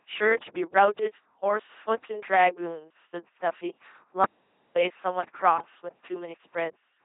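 LPC-10 vocoder coding runs from start to finish. The speech has been reduced to a ten-pole vocal tract filter driven each moment by either a buzzing pulse train or noise, with no blend of the two. The damage is heavy: the voice is flat, mechanical and robotic, with buzz or hiss wherever the voiced/unvoiced decision goes wrong. Nothing is left above 3.8 kHz, and the character fits a 2.4 kbit/s stream.

An audio dropout to silence occurs from 4.25 s to 4.76 s, erasing about half a second mid-flow. The speech stops abruptly and resumes just as abruptly. The gap is silent, with not even faint room tone remaining, and whatever was said in that stretch is lost. The likely cause is a momentary loss of input, such as a disconnected device, a failed link or an accidental mute, while recording continued to write silence.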